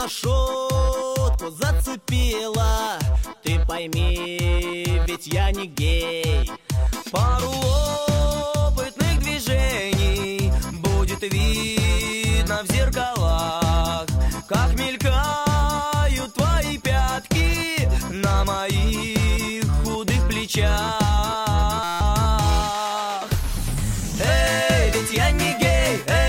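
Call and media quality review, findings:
Steady buzz, 21.83–22.01 s. Harsh tonal drone at about 172 Hz replaces the audio, then normal playback resumes. Roughly a fifth of a second of audio missing. System hang loop: host or audio driver stalled while the output hardware kept replaying its ring buffer. A 5.8 ms slice repeated about 30 times, consistent with a 256-sample buffer. The short loop period produces the buzz rather than a stutter. Probable component: driver/DMA buffer servicing.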